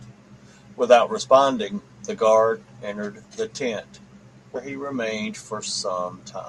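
Speech with compressed frames skipped at 4.55 s: roughly 70 ms of audio vanishes, consistent with about four 20 ms frames, leaving an abrupt spectrogram discontinuity.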